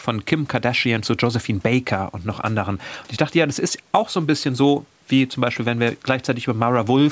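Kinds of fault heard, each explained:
No technical faults can be heard in the speech, which shows the normal effects of call microphone processing: the lowest bass is trimmed by its high-pass filter and nothing is present above 8 kHz.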